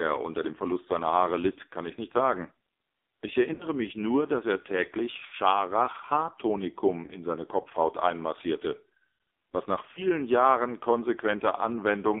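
Speech heard through an AMR narrowband mobile codec for the whole clip: a 250 Hz to 3.6 kHz band and a heavily buzzy, synthetic tone point to a very low AMR-NB bitrate, around 5.9 kbps. Lost AMR speech frames occur at 3.54–3.67 s (before "mich nur dass er"), 5.26–5.34 s (after "nur dass er täglich"), 7.06–7.19 s and 9.92–10.02 s (after "was nach"). At each one the decoder stretches its last good sound with fading gain, which fits two or three dropped 20 ms frames.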